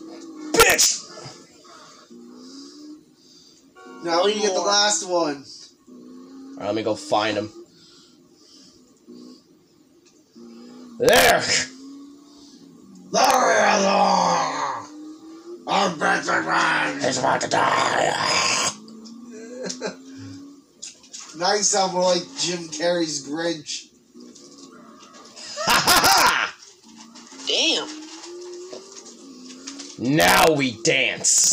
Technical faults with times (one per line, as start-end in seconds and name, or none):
0.60-0.86 integer overflow
11.09-11.30 integer overflow
13.25-13.34 integer overflow
25.70-26.29 integer overflow
30.21-30.47 integer overflow
31.38-31.47 integer overflow